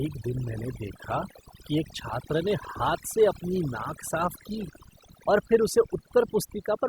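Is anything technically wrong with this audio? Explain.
Yes. Overdone noise removal runs through the whole clip: a noise reducer set far too aggressively cuts individual frequency bands whenever they approach its noise estimate, taking quiet speech detail with them. The background drops and breaks up into twinkling specks.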